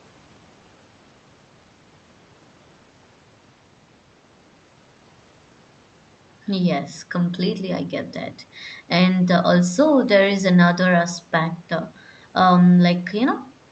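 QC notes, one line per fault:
No faults heard in this speech recording.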